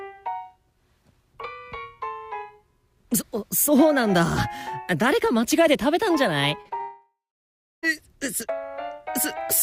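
Just after 6.6 s the audio briefly smears and wobbles three times in quick succession, at 6.61 to 6.67 s, 6.69 to 6.73 s and 6.77 to 6.81 s. These are short concealed packet losses: roughly 40, 20 and 20 ms of the stream arrived too late to decode, and the receiver patched each gap by extending the preceding sound before blending back into the real signal, leaving a brief smear instead of the true content. From 6.81 s the sound trails off into a fading buzz or hiss and then goes silent for about 0.66 s, resuming at 7.85 s with no overlap. This is a long network dropout, with about a second of audio missing. The cause is likely a sustained interruption in delivery: the concealer continued the last sound as long as it could, let it decay, then held silence until packets flowed again, so the lost second is simply absent.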